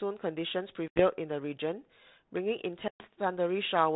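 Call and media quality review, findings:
Packet loss on an ADPCM call, 0.88 to 1.04 s and 2.88 to 3.06 s: about 80 ms, then 120 ms, of audio dropped, a few packets and then several, filled with hard-edged silence. The decoder's adaptive predictor and step size lose sync with the sender's, so speech returns with brief distortion, settling within tens of milliseconds. The narrowband sound, capped below 4 kHz, fits 32 kbit/s G.726.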